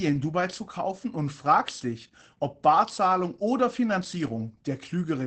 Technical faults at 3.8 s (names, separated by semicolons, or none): Opus voice compression